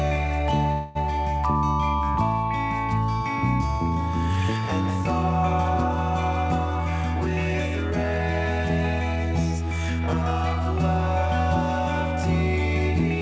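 From 0.72 to 0.97 s the sound stalls into a fading buzz or hiss for about 230 ms, then carries on exactly where it stopped. That points to a call audio freeze, likely packets held up until the jitter buffer ran dry. Unlike a dropout, nothing is lost; everything afterward is simply delayed. Throughout, the band stops at 8 kHz, which fits a G.722 call path.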